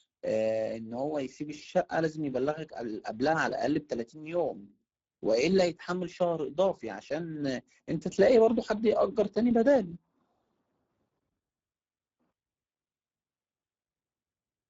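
Throughout the speech, the audio has passed through the Speex codec at a low setting, which fits a bitrate near 10 kbps. Too few bits remain for the excitation signal, so the speech sounds plainly noisy and hoarse, with nothing above 7.7 kHz.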